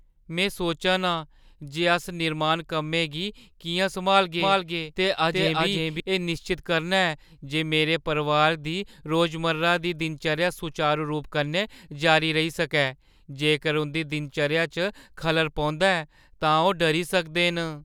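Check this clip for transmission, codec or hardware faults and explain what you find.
One fault is present: a doubled audio track between 4.40 and 6.00 s. A second, full-band copy of the speech trails the original by around 400 ms at roughly equal loudness, most likely from the signal being captured again through a slower path or from an edit leaving two offset copies. It sounds like a clean, dry slap-back echo with no room tail, and it starts and stops abruptly. On a spectrogram, each syllable's pattern repeats about 0.4 s later at matching intensity, and the waveform shows the envelope duplicated and overlapping.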